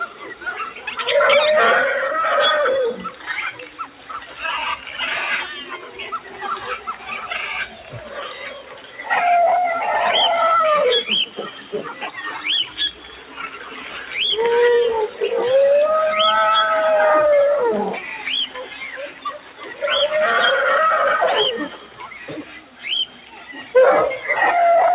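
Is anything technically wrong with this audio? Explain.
Yes. Across the whole clip the level breathes and pumps: held, steady parts keep sinking while sharp onsets punch through, and the swing between them is around 10 dB. This is a noise suppressor applied to music or sounds. A suppressor tuned for speech treats sustained tones, ambience and decays as background noise and pulls them down frame by frame, so the balance keeps shifting and tails thin out. The sound comes through a narrow call band with nothing above 4 kHz, so the pumping is heard against an already dull top end.

At six points the sound is cut by the noise suppressor more deeply: 0.06–0.91 s, 2.94–4.92 s, 5.65–9.02 s, 11.26–14.13 s, 18.47–19.83 s and 21.69–23.74 s. In each stretch the sustained material drops by about 8 to 9 dB, for somewhere between under a second and about two seconds in total. The suppressor has judged these steady passages to be noise and attenuated them harder, while sudden attacks within the same stretches largely escape.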